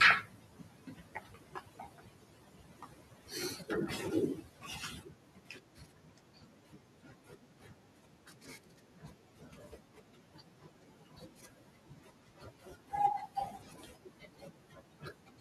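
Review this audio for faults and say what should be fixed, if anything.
Quiet consonants and word endings sound swallowed and faint, dipping by about 12 to 13 dB from 0.23 to 3.31 s, 4.41 to 4.69 s, 4.98 to 12.92 s and 13.52 s to the end. This is speech cut by the noise suppressor, which mistook soft speech for background. Room noise sits about 27 dB below speech. Lowering the suppressor's strength or raising its threshold would keep it from clamping soft speech.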